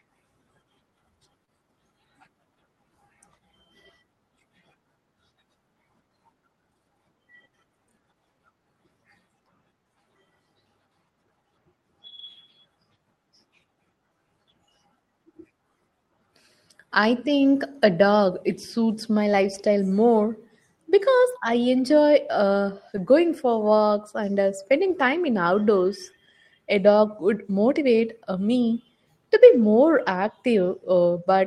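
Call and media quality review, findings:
Brief smear and wobble in the speech at 1.45 to 1.49 s. Short concealed packet loss: about 20 ms of audio failed to reach the decoder in time, patched with about 21 ms synthesized from the preceding sound, then crossfaded back. Jitter buffer and decoder concealment. Call path: audible band tops out near 12 kHz, consistent with Opus at roughly 32 kbps.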